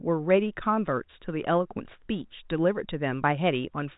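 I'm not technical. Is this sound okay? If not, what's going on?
Yes, no faults heard.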